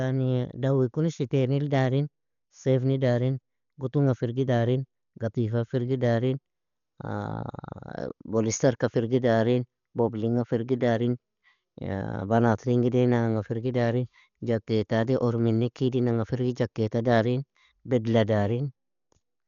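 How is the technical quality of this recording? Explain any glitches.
The recording is heavily degraded by lossy coding for its entire length. Throughout the speech, the damage likely comes from Dolby Digital compression at a low bitrate, around 48 kbps judging by the sound. Running short of bits, the encoder cuts the band so nothing remains above 6.9 kHz and leaves many frequency lines to be filled with noise. The result sounds dull and muffled, with a rough, fluttering grain around voiced tones.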